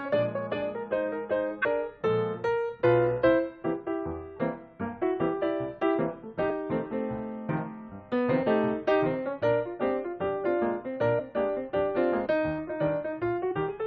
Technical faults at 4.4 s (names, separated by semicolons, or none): compressed frames skipped